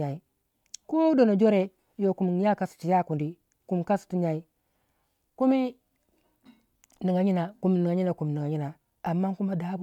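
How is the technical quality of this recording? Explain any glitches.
No glitches or technical faults turn up anywhere in the recording, so there is nothing to explain.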